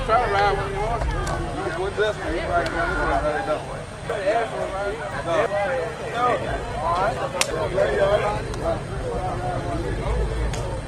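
From 4.10 to 5.46 s there are chunks out of order: a block of about 0.34 s plays three blocks late, after the material that should follow it. Nothing is missing, but the sequence is scrambled across three hard joins. At 5.65 s the adaptive stream switches to a lower bitrate and stays there to the end. The change in quality is sudden, with no gap, and codec artefacts rise. The degradation is consistent with a step down from Opus at 64 kbit/s to 16 kbit/s. Inside that stretch, from 6.14 to 7.51 s, the same reordering recurs with another 0.34 s block three places late.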